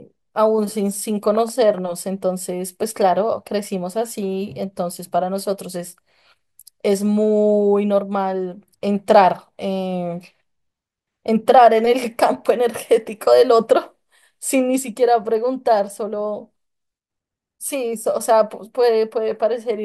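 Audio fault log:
No audible faults anywhere in this recording.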